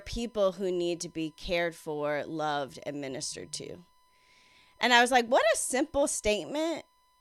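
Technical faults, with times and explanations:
Throughout, USB whine: a steady 1 kHz tone sits well under the speech at about -40 dB, USB frame current leaking in through power or ground.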